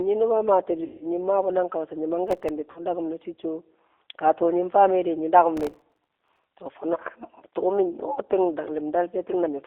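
Speech carried over a narrowband VoIP path, with G.729 codec damage plainly audible throughout: the band is confined to roughly 300 Hz to 3.6 kHz, and the slightly rough, synthetic texture of pulse-excited, filter-modelled speech fits an 8 kbit/s G.729A stream. VoIP packet loss concealed by the speech codec occurs twice. From 0.84 to 1.07 s about 170 ms of audio is missing, and from 2.71 to 2.80 s about 50 ms. In each case the decoder stretches its last pitch and filter state into a buzzy tone or coloured noise that fades, and the sound stays weak briefly after packets resume. Processor overload crackle appears from 2.28 to 2.49 s and, much longer, from 5.57 to 6.44 s. Runs of missed deadlines on very short buffers, which fits a buffer of about 1.5 ms, leave about 15 and about 70 tiny silent gaps with hard edges, heard as crackle or gritty tearing over the sound.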